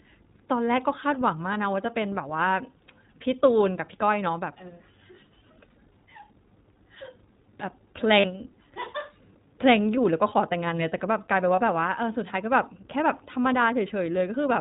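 Throughout, the iLBC codec limits the speech to narrowband, with nothing above 4 kHz on a spectrogram and a plainly rough, synthetic texture, which fits 20 ms frames at about 15 kbps. At 1.54 to 1.58 s, 8.20 to 8.26 s and 11.56 to 11.60 s, lost iLBC frames are patched with a repeated pitch cycle, producing a brief buzzy held vowel. These show as regularly repeating waveform periods and smeared harmonics, and the speech recovers immediately afterwards.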